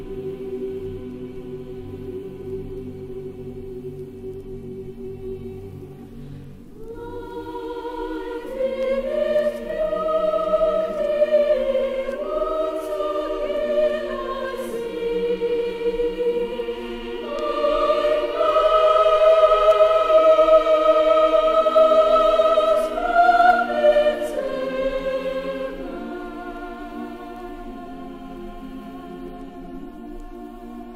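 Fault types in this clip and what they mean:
Nothing in this one stands out as a technical problem, so there's no fault type to list here.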